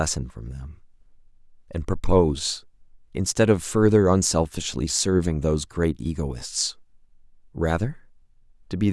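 No technical faults can be heard anywhere in the speech recording.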